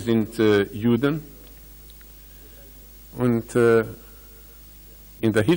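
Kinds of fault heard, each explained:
Hard clipping, 0.10 to 1.08 s, 3.23 to 3.80 s and 5.25 to 5.53 s: in each stretch the sound drives some stage past the largest value it can carry, about 4 dB over in the first two and about 6 dB over in the last, so every peak is sheared off flat. Those squared tops create harmonics well above the original content, heard as crackle on the peaks, roughest in the final span.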